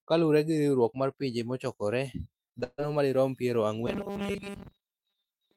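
Speech, with two separate faults. From 2.49 to 2.80 s, just before "madirom piero", there is repeated packet loss with a robotic sound. Four holes fall close together. Each is patched by stretching the last bit of sound, so about 61% of that span is filler. The longest hole is 141 ms. The result is choppy and robotic, with pieces of the speech gone. From 3.87 s, after "madirom piero", to the end, the sound turns into a rigid metallic buzz fixed at 200 Hz. It still roughly follows the speech. This is robotic sound from repeated short buffers. The likely cause is new audio arriving too seldom, so a tiny slice is looped to fill the time while real audio is skipped. A 200 Hz buzz points to a 5 ms repeat. Most of this stretch is made of repeats.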